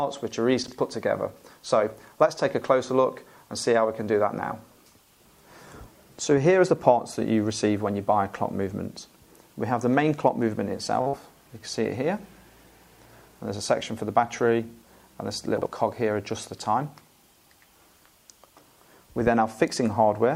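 At 0.64 to 0.73 s the first instance of chunks out of order occurs: a 42.67 ms chunk arrived one slot late and plays after the chunk that should follow it. Nothing is lost, but the sequence is scrambled over about 85 ms, with three hard joins. It sounds like a brief jumbled stutter. On a waveform the joins show as abrupt discontinuities, and on a spectrogram the patterns visibly jump back and forward. The same fault recurs at 5.63 to 5.72 s and 15.58 to 15.66 s.

At 11.01 to 11.08 s comes a short stall from a late packet. The jitter buffer ran dry, so the receiver held the last sound for 47 ms until the packet turned up, then carried on from the same point. Nothing is missing, but playback now runs 47 ms later. The sound is briefly held, giving a buzzy sustain. A spectrogram shows horizontally smeared, unchanging bands, and the waveform shows a repeating, near-periodic stretch.

Immediately after, from 11.08 to 11.15 s, a burst of packet loss follows. 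The receiver filled 50 ms by extending the last sound and fading it down, while 60 ms of actual audio was skipped. When playback resumes it is further on than where it stopped. This is heard as a held buzz or fading hiss, then a jump. The waveform shows a decaying envelope, and the spectrogram shows dimming flat bands before an abrupt change.

From 14.19 to 14.83 s the jitter buffer speed-up trims the backlog. The receiver removed about 70 ms in total as many short pitch-period-sized slices, which raised playback to 108% speed without changing pitch. The passage sounds hurried. A spectrogram shows features compressed in time with unchanged frequencies, and the waveform shows cycles of unchanged length, with tiny seams where pieces were cut out.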